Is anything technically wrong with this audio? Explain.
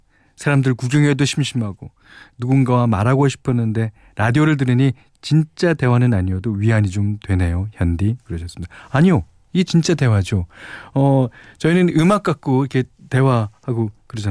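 No, there's nothing technically wrong here; the speech comes through without any faults to point out.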